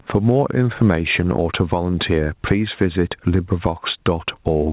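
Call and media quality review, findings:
Gain pumping, throughout the speech: level swing around 15 dB, dynamics squashed. Probable component: mic preamp gain set far too high, likely driving a fast limiter/compressor. Band-limited to 4 kHz, consistent with G.711 mu-law at 64 kbps.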